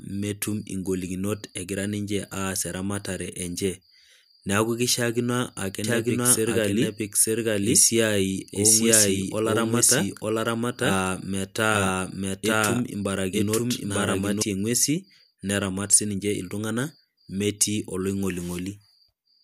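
A speech clip with a doubled audio track from 5.84 s to 14.42 s, starting just after "keishaakino ake". A second, full-band copy of the speech runs behind the original by roughly one second, at about the same level. It has no decay or room colour, so it is not an echo. It cuts in and out abruptly at both ends. The likely cause is a slower second capture path or an edit that left two copies out of step.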